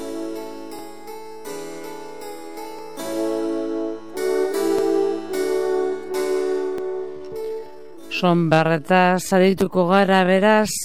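From 7.09 s to the end, software likely stretched this part to fill a longer slot, repeating short slices to hold pitch. The result is a time-stretched section running at two-thirds speed: abruptly slower, with unchanged pitch.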